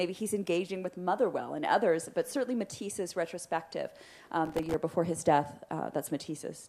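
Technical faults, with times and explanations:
4.45–4.74 s: processor overload crackle. Dozens of roughly millisecond-long buffers missed their deadline and went silent. The rapid clustered gaps, unlike a single dropout, sound like gritty tearing.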